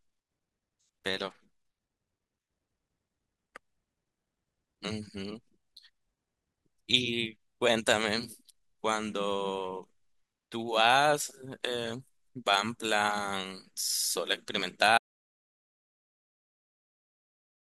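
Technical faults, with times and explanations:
14.98 s to end, audio dropout to silence: speech cuts off mid-flow into silence with no room tone, likely a lost input or link; waveform goes flat, spectrogram blank.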